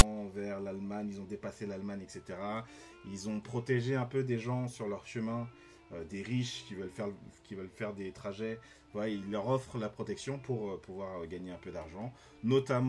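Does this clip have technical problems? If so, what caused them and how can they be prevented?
Yes: at 0.0 s, file tags played as audio. A text tag block is decoded as samples, giving a brief, hard-edged rasp offset to one side. Prevent it by having the player skip or strip metadata chunks before decoding.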